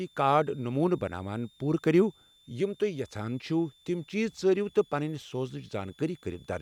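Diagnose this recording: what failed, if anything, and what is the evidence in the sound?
A switching supply whistle sits under the speech for the whole clip, at the analogue stage: a thin tone wandering between about 3.4 and 3.6 kHz, roughly 35 dB below the speech. Unlike mains hum, it is high-pitched and its pitch drifts as the supply's load shifts.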